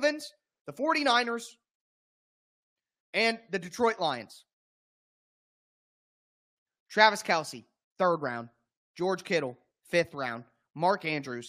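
A rebuffering stall runs from 4.96 to 6.49 s in this speech recording: playback drained its downloaded audio, fell silent while waiting for more data, then picked up exactly where it halted, losing nothing but adding about 1.53 s of dead air.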